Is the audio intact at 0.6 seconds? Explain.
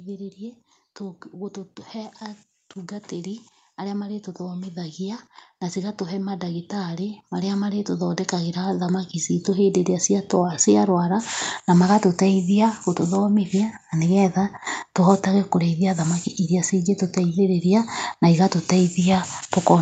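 Yes, the speech at 0.6 seconds is intact, with only the normal trimming of the lowest bass and the top end ending around 8 kHz that come from the call's microphone processing.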